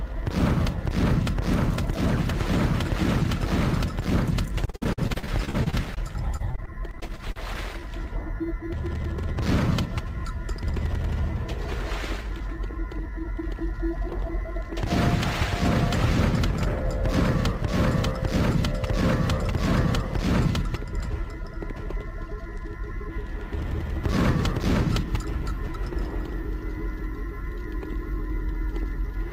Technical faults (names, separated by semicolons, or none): repeated packet loss (robotic sound); jitter buffer speed-up